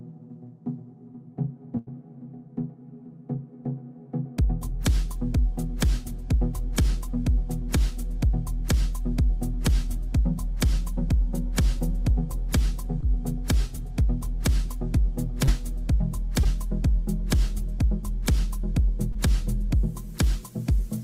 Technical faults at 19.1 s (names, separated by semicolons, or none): short concealed packet loss